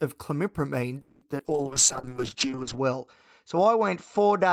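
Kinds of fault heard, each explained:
Repeated packet loss (robotic sound): Between 1.01 and 1.46 s the stream keeps dropping packets, four gaps in quick succession. The receiver patches 230 ms of it by stretching the last bit of sound forward, but 80 ms is simply missing. The longest gap is 200 ms, and about half that stretch is concealed rather than real audio, so it comes across choppy, with pieces gone.
Call bitrate drop: From 1.47 s to the end, the bandwidth estimate collapses and the encoder gets pushed from 32 kbps down to 7 kbps. It sits at that floor for about 1.3 s. At that rate Opus codes everything much more coarsely and trims the audio band from 20 kHz to 8 kHz. The top end goes dull and the detail thins out.
Jitter buffer slow-down: Around 2.09 to 2.56 s the jitter buffer is building up a reserve, so the receiver repeats tiny slices of the signal, single pitch periods or slivers of pause, over and over. 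That adds 50 ms to the stretch, and playback runs at about 91% speed. The pitch stays the same, but sounds get drawn out a little longer than they should be.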